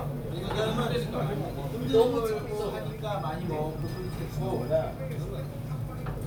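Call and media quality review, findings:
Nothing to flag on this one: the sounds in the clip come across without any audible faults, so no action needed.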